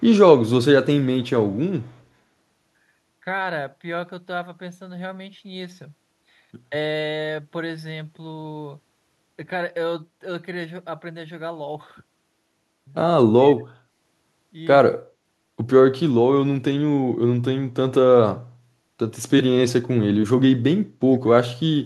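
Echo leak is the likely cause at 1.23 to 1.28 s and again at 1.82 to 1.96 s: the far end's echo canceller seems to have let part of its loudspeaker signal back into the microphone path. In this speech, it returns as a faint, delayed copy trailing the voice by 111 ms, sitting far below the direct speech, around 35 to 40 dB down. It comes through as brief scraps rather than a sustained repeat.

Speech suppressed in double talk is the likely cause from 13.32 to 13.73 s and from 14.88 to 15.05 s: with both sides talking at once, the echo canceller could not tell the local talker from loudspeaker echo and attenuated everything. The voice drops sharply, by as much as about 35 dB in the first stretch and about 25 dB in the second, with roughly a third of a second and then a sixth of a second audibly pulled down or cut out.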